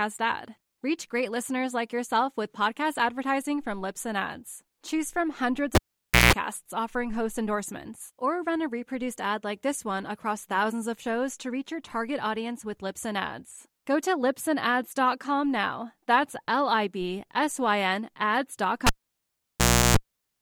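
At 5.75 s, after "from hundreds", a pop cuts the speech to near silence for about 0.53 s, with a 60 Hz hum lasting 0.17 s before a second pop brings back "offering host endorsements or". At 18.87 s the same pattern runs about 1.05 s, with 0.35 s of buzz. Both are a cable pulled and plugged in: the live plug is withdrawn, and while only the tip touches on reinsertion, it picks up mains hum.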